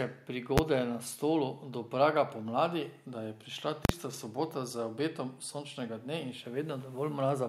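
At 0.58 s and 3.85 to 3.89 s, invalid numbers hit full scale. The output jumps to maximum. The first gives one bang, the second a loud pop, silence, another pop.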